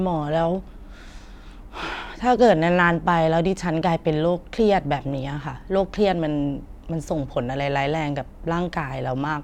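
From 2.42 s to 2.82 s, the speech runs into hard clipping. For about 0.4 s the signal is driven roughly 2 dB past what a stage in the chain can pass. The loudest peaks are cut flat instead of rounding off. Those flat tops add harmonics high in the spectrum. Because the overload is small, it isn't a constant fuzz. It shows up as a brief crackle on the peaks of that short stretch.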